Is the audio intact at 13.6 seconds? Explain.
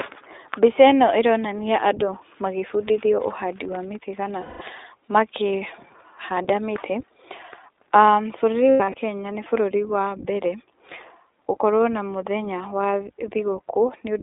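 No. At 13.6 s the speech is still passing through the iLBC codec, which affects the whole clip. Each short frame, consistent with 20 ms frames at a 15.2 kbps mode, is coded independently, leaving plainly audible roughness. The band is limited to 300 Hz to 3.7 kHz.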